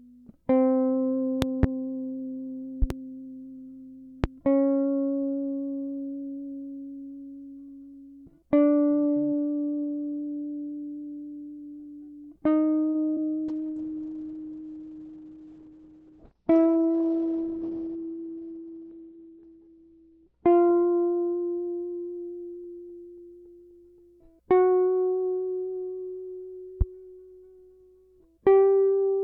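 A music clip with five kinds of fault. Loud pops occur as a double pop at 1.42 to 1.66 s, another pair at 2.82 to 2.93 s, and single pops at 4.24 to 4.27 s and 26.81 to 26.84 s. They peak roughly 15 to 20 dB above the music, which continues underneath. The likely cause is a voltage pulse from a plug, switch or static entering the chain. On a waveform each is a tall isolated spike; on a spectrogram, a thin vertical line across all frequencies. At 12.89 to 12.97 s, a short stall from a late packet holds the sound for about 52 ms while the receiver waits, then resumes from the same point with nothing lost. This appears as a smeared, flat stretch with repeated texture and no new onsets. Short concealed packet loss at 13.13 to 13.27 s drops about 40 ms of audio. Synthetic continuation fills the gap, giving a brief smear or wobble. The spectrogram shows a blurred patch where transients soften. 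A call bitrate drop runs from 13.50 to 23.49 s. The roughness and the collapse in bandwidth from 20 kHz to 4 kHz point to the encoder falling from around 128 kbps to about 8 kbps, staying lowest for about 5.75 s. The music turns muffled and watery, and the spectrogram is visibly empty above 4 kHz. A jitter buffer speed-up at 15.17 to 15.63 s plays the music at 113% speed by cutting about 70 ms in small pitch-period slices. Pitch stays the same while the tempo briefly rushes, and the waveform shows compressed, tightened beat spacing.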